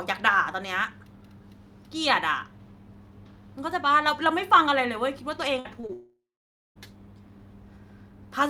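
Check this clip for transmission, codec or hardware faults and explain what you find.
The clip has network-related faults, all clustered between 5.59 and 6.78 s of this speech recording.

Burst of packet loss, 5.59 to 5.67 s: about 60 ms of consecutive audio never arrived in time. The decoder extended the preceding sound for roughly 54 ms while fading it down, so it is heard as a brief held buzz or hiss before speech resumes with that fragment skipped.

Short concealed packet loss, 5.81 to 5.85 s and 5.87 to 5.91 s: each time about 20 ms went missing. The receiver bridged each hole by continuing the last waveform, from its pitch or as shaped noise, then crossfaded back, leaving a quick smear or wobble.

Long network dropout, 5.93 to 6.78 s: audio breaks off for about 840 ms. The last sound is stretched into a decaying buzz or hiss for roughly 300 ms, then about 540 ms of silence follows before speech returns with that portion gone, likely because the connection stopped delivering packets altogether.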